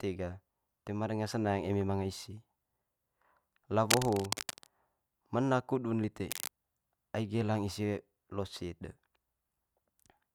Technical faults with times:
3.90-4.70 cable scratch noise
6.30-6.48 cable scratch noise

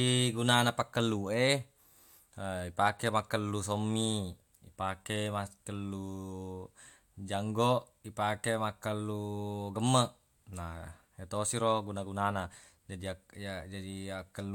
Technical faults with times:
none

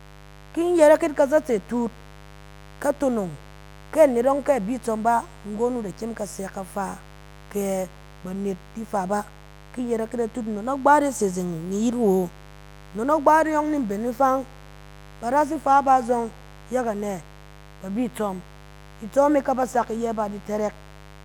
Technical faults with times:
0.00-21.24 mains buzz

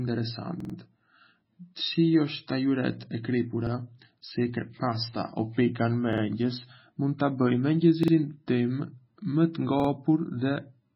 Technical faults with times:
0.00-10.96 MP3 compression
0.60-0.74 repeated buffer
3.67-3.72 repeated buffer
6.13-6.22 repeated buffer
8.03-8.13 repeated buffer
9.80-9.89 repeated buffer

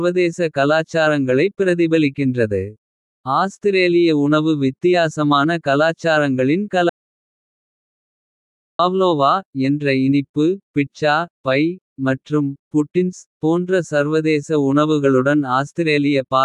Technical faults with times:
6.89-8.79 audio dropout to silence

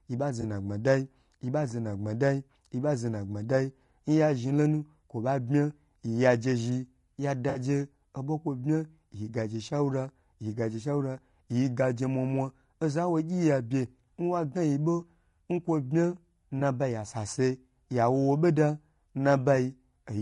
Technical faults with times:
0.00-20.21 low-delay AAC compression
0.41-0.44 AAC frame loss with concealment
7.49-7.59 AAC frame loss with concealment
16.59-16.62 AAC frame loss with concealment

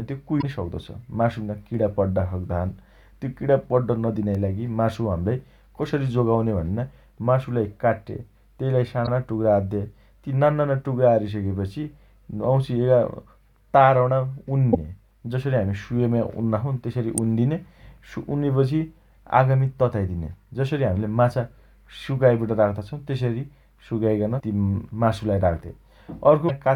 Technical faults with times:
0.38-0.44 damaged data in a compressed stream
4.35 electrical switching spike
9.03-9.08 damaged data in a compressed stream
14.70-14.75 damaged data in a compressed stream
17.18 electrical switching spike
24.36-24.42 damaged data in a compressed stream
26.45-26.50 damaged data in a compressed stream

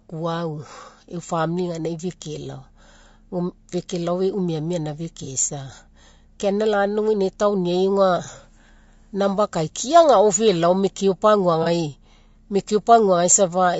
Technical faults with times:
0.00-13.80 low-delay AAC compression
5.24-5.28 AAC frame loss with concealment
8.24-8.29 AAC frame loss with concealment
11.63-11.68 AAC frame loss with concealment

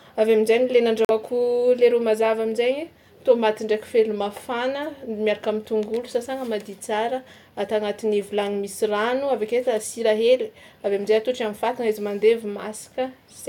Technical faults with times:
1.05-1.11 Bluetooth stall

